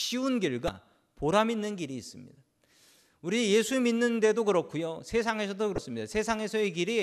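A speech clip with two short bursts from damaged data in a compressed stream, at 0.66 to 0.69 s and 5.75 to 5.78 s. Each is brief. Corrupted bytes made the decoder misread those frames and lose sync until it found the next frame header.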